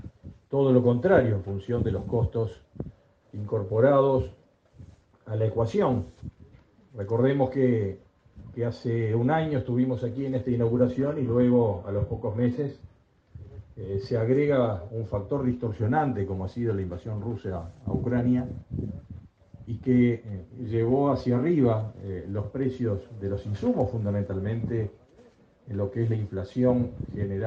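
From 10.96 to 12.96 s the stream drops to a lower bitrate for about two seconds. The treble turns thin and synthetic, with a hissy, swirly sheen and rising codec artefacts, which points to a fall from a full-band AAC stream to a very low-rate HE-AAC rendition rebuilding its highs. Unlike packet loss, there is no gap or stutter. The quality simply switches abruptly at both edges.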